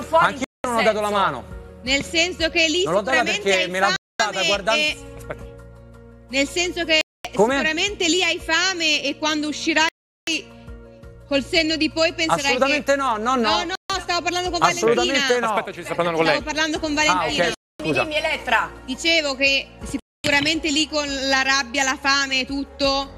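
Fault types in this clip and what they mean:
Bluetooth stall: seven sudden cuts to silence lasting 0.14 to 0.39 s, likely a starved headphone buffer; flat waveform gaps, blank vertical bands on spectrograms.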